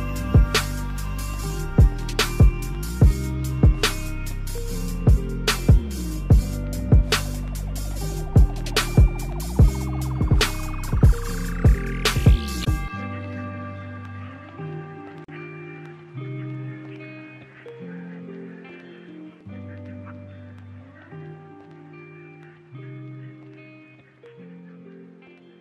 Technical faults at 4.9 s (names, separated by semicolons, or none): none